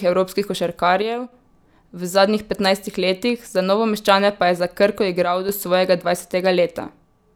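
From 1.02 to 1.32 s the speech level drops abruptly by about 6 dB and then returns just as suddenly. The same step recurs from 5.24 to 5.49 s, ending right before "do svojega". The cause is likely one channel dropping out. With only one side left feeding the mono sum, material common to both channels falls by half, and anything carried solely by the missing side vanishes for those stretches.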